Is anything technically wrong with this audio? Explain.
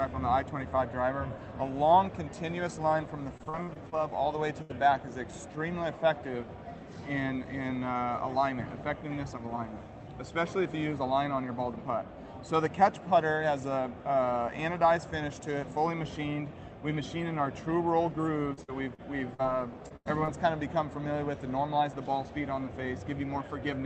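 Yes, the audio has packet loss, heard as choppiness, dropouts and brief smears.

Repeated packet loss (robotic sound) occurs from 3.37 to 3.94 s and from 18.53 to 19.46 s. The sound turns choppy, with pieces missing. Packets kept arriving lost or late, and each gap of up to about 40 to 50 ms was patched by extending the preceding sound.

A burst of packet loss occurs at 4.62 to 4.71 s and 19.96 to 20.07 s. The sound holds as a fading buzz or hiss, then jumps ahead. About 80 ms of consecutive packets never arrived in time, so the receiver continued and faded the last sound, and that span is lost.

Short concealed packet loss occurs at 19.88 to 19.92 s and 20.25 to 20.29 s. Each is a brief smear or wobble. Roughly 20 ms of audio failed to reach the decoder, and the gap was bridged with synthesised continuation before blending back into the real signal.

These faults sit on a call path whose high end stops near 8 kHz, which fits Opus at around 24 kbps.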